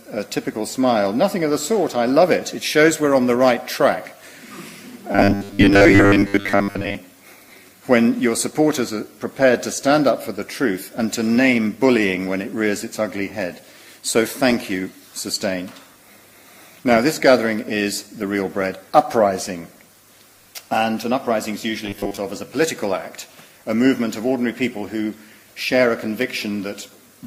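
From 5.12 to 6.95 s, and again from 21.86 to 22.17 s, the sound turns robotic, with a rigid metallic buzz at 100 Hz. That's likely repeated short buffers: roughly 10 ms chunks looped to cover late audio, with most of the real signal skipped.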